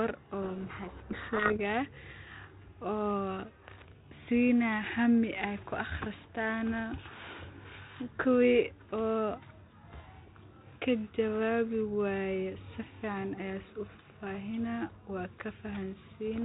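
From 0.42 to 1.61 s the speech is buried under a harsh, gritty distortion that swamps it for just over a second. This is a codec payload misread: the sending and receiving ends disagree on the bit order inside each G.726 code word, so the decoder takes well-formed frames and assigns their bits to the wrong positions. The reconstructed signal becomes rasping garbage until the packing matches again. Afterwards only the light band-limited colouring of 32 kbit/s G.726 remains.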